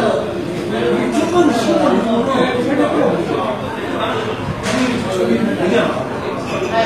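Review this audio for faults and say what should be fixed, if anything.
The whole clip carries plainly audible HE-AAC compression damage, likely from a low-rate HE-AAC encode; the artefacts fit something around 24 kbps. The bright top end is synthesized rather than real: the codec keeps the lower spectrum and fills the treble by copying those bands upward under a coarse envelope. The upper harmonics don't line up with the ones below, so the highs sound gritty and metallic, and nothing is left above 14.9 kHz. To prevent it, work from the original or a higher-bitrate encode, ideally plain AAC or lossless.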